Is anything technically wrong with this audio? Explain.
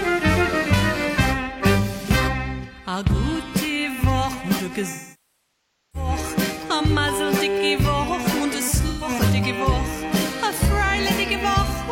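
Yes. From 4.89 to 6.09 s the sound turns smeared and hollow, then sinks toward silence before fading back in. A shorter blurred, noisy patch follows at 8.88 to 9.08 s. Both are AAC frame loss with concealment. The decoder lost compressed frames, roughly a second's worth in the first gap (which fits about two dozen frames) and 128 ms in the second. It rebuilt the missing audio from the last good spectrum, then faded it out as the longer gap went on.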